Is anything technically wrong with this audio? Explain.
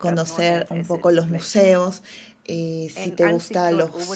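No, nothing is wrong: the speech is band-limited to about 8 kHz, as expected from a call microphone chain and a wideband call codec such as Opus, and no faults can be heard.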